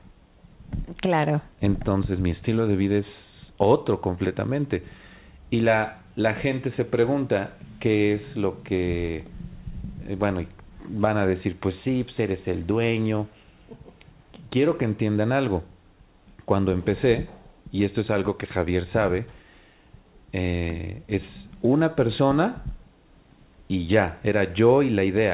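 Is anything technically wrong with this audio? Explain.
No, nothing here is technically wrong.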